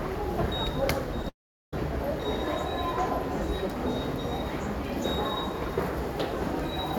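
At 1.22 to 1.25 s the sound briefly smears, a short concealed packet loss. About 10 ms of audio never reached the decoder in time, and the receiver covered the hole by stretching the preceding sound for roughly 13 ms before blending back into the real signal, so the glitch reads as a brief wobble rather than a gap. Only a moment later, from 1.29 to 1.73 s, the audio turns into a fading buzz or hiss continuation that sinks into about 0.38 s of silence before the sound returns, with roughly 0.44 s of material simply absent. This is likely a long network dropout: nothing arrived for that stretch, the concealment could only extend the last sound for a while before giving up, and playback resumed further on without the lost portion.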